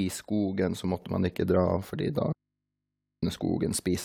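A microphone volume step-up hits this speech recording at 1.02 s: voice and background jump together by about 5 dB in a single instant, as the call software judged the microphone too quiet and raised the device's input gain in one move. An audio dropout to a faint residue follows from 2.32 to 3.23 s, cutting the voice abruptly for about 0.9 s and leaving only mains hum, roughly 55 dB below the signal. This is likely an input that stayed live after losing its source.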